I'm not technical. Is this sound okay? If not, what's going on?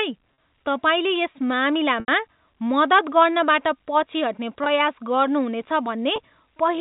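No. Four brief gaps come from packet loss with pitch repetition. Bits of the sound were lost on the way. The receiver filled each hole by repeating the last tiny cycle of sound, giving a short held buzz on the shorter ones, while the longest fades into silence before the speech returns. They fall at 0.34–0.38, 2.00–2.08, 4.64–4.66 and 6.16–6.18 seconds. The longest is 80 ms. The narrow, phone-line tone is just normal telephone coding.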